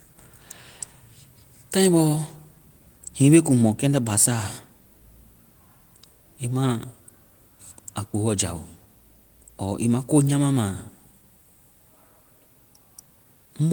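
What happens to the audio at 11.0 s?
Nothing goes wrong at 11.0 s: the speech runs on intact through the Opus voice coding, which carries it in full band at a rate that fits about 20 kbps.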